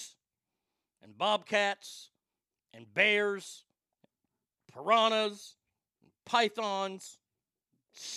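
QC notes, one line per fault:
No faults found in clip.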